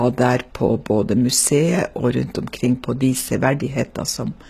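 Throughout the speech, s sounds turn gritty and metallic, likely from HE-AAC compression near 20 kbps: treble rebuilt from copied lower bands, with a spectrogram showing smeared, repeated high-band texture and nothing above about 14.9 kHz.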